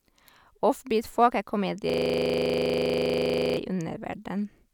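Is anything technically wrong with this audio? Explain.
Yes. From 1.90 to 3.57 s the speech locks into a system hang loop: a 40 ms piece repeats exactly, about 42 times, because the system froze while the audio hardware kept replaying its ring buffer. At 25 Hz it sounds like a rattling stutter, not a random dropout.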